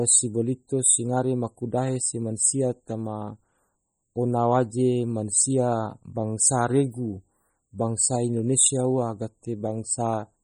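From start to finish the speech carries heavy damage that is likely MP3 compression, consistent with an encoder starved of bits at roughly 32 kbps. With so few bits, weak frequency lines are dropped and reinstated from one frame to the next, so the sound turns watery and swirly. S sounds pick up metallic chirps, and consonant onsets smear. Content reaches to about 21 kHz, so the damage comes from the missing detail rather than a treble cut.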